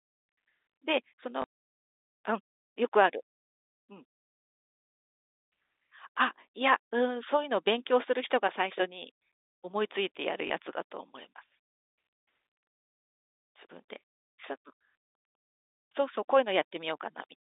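At 1.42 s and again at 10.48 s there is packet loss with the last packet repeated. Each gap lasts 20 ms, which fits one lost packet. The receiver replays the previous packet to fill it. The single repeat gives a small blip through the telephone-band sound.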